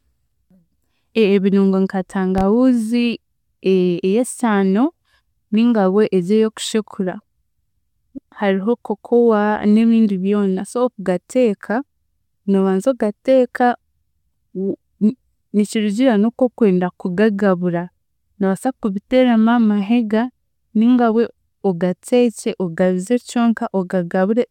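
At 2.38 to 2.42 s a single loud pop sits on top of the speech, peaking a little above the speech level while the talker carries on underneath. It is likely a brief voltage step or pulse from a plug, switch or static discharge, heard as one sharp thump.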